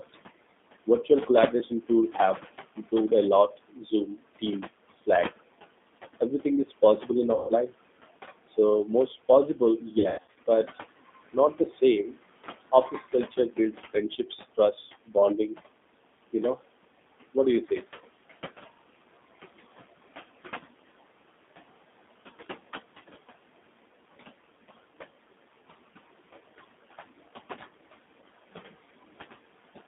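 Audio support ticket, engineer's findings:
Noise suppressor artifacts, throughout: background pumps down by about 19 dB between phrases and swells under speech. This is unlike steady room noise (about 14 dB below speech), because the level tracks speech activity frame by frame.

G.729 codec, throughout: band limited to roughly 200 Hz to 3.6 kHz, with rough, slightly synthetic speech and warbling residual noise. The 8 kbit/s model-based coding (G.729A) causes the damage. It is distinct from simple narrowband filtering by its rough, synthetic texture.

Speech cut by the noise suppressor at 0.86–2.13 s, 2.76–5.08 s, 6.2–7.1 s, 8.47–10.78 s, 11.33–12.16 s and 12.72–15.58 s. Soft consonants and word endings are swallowed, with drops up to about 20 dB and the worst spans up to about 0.7 s. The suppressor is misclassifying speech as noise. Unlike packet loss, there is no buzz, only missing energy.

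VoIP packet loss concealed by the speech codec at 7.34–7.52 s, 10.0–10.45 s and 14.81–14.89 s. The codec stretches speech into a fading buzzy tone or coloured noise as the decoder extrapolates its last pitch and filter. About 140, 260 (in bursts up to 100 ms) and 60 ms are lost, which fits 20 ms packets. The sound stays weak briefly after each gap.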